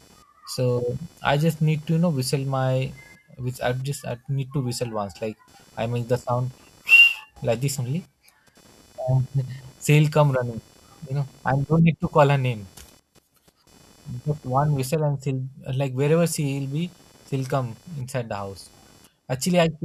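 Computer activity noise runs through the whole speech clip. A faint buzz, pulsing around 500 times a second, follows the machine's load, not the speech.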